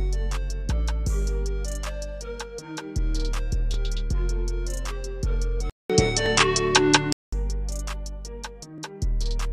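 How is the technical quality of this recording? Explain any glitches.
There is one clear glitch, between 5.70 and 7.33 s, where the sound changes character in a way that points to the input likely being switched to a poorer device. A gap of about 200 ms opens at the switch, then the audio comes back duller, with nothing above 9.9 kHz, a level shift of roughly 5 dB and a new background hiss sitting well below the signal. On a spectrogram the upper band is sharply cut off for that stretch, and the waveform shows the brief flat gap.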